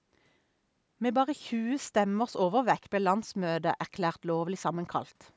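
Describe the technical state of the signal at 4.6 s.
At 4.6 s the speech is intact, with nothing wrong at that moment beyond the normal call microphone processing, which leaves no content above 8 kHz and trims the lowest bass.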